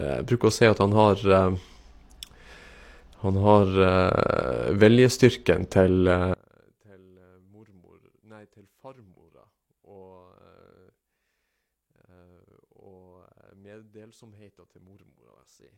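It's a speech recording, and from 6.34 s to the end at 15.77 s the level collapses by about 32 dB, leaving just a faint trace. That's likely one channel inverted, so the shared centre content cancels when the stereo pair gets summed to mono.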